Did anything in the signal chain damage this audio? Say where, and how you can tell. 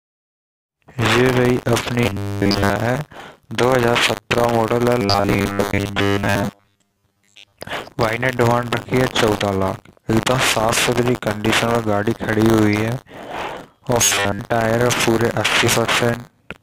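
Yes, at the driver or buffer stage. Buffer tearing runs through the whole clip as a rattle at 100 Hz, which fits a 10 ms period. A small slice of each buffer carries audio from a few tens of milliseconds earlier, hard-joined on both sides.

Robotic sound from repeated short buffers appears at 2.06 to 2.76 s, 5.01 to 7.52 s and 14.03 to 14.39 s as a rigid, metallic 100 Hz buzz. The first stretch is entirely loops and the others mostly. The likely cause is starved buffers being replayed while real audio is skipped, so content is lost, not smeared.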